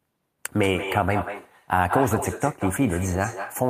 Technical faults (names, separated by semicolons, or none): echo with no canceller